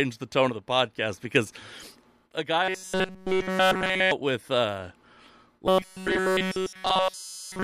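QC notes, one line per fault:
2.63–4.11 s, robotic sound from repeated short buffers: speech becomes a rigid metallic buzz near 188 Hz, likely from a roughly 5 ms buffer replayed in place of nearly all new audio.
5.67–7.63 s, robotic sound from repeated short buffers: the same fixed 188 Hz metallic drone returns, speech roughly tracked, likely as the short repeating buffer again replaces nearly everything.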